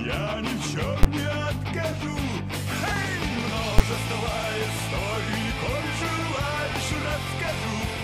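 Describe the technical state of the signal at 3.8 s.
A single sharp bang at 3.79 s, a short block held flat at one extreme value, far beyond the audio's peaks, that cuts straight through the surrounding sound. It is invalid numbers at full scale: a calculation yielded infinite or undefined values, and the output clamped them to its maximum positive or negative level. The whole block, about 11.6 ms, fits a 512-sample processing buffer, and the stretch is too short to hear as separate pops, so it lands as one bang.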